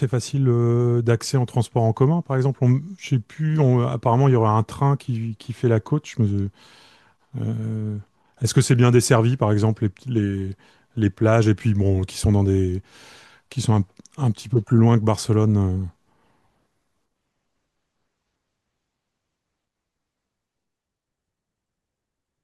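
Nothing to flag here, as the speech runs along without any technical faults turning up at any point.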